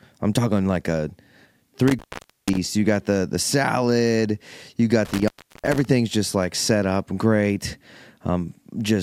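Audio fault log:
1.88–2.58 s and 5.05–5.85 s, intermittent contact: a loose connection opens for about 0.49 s, then 0.36 s, leaving faint hiss; crackle marks vertical broadband streaks bracketing near-flat waveform gaps.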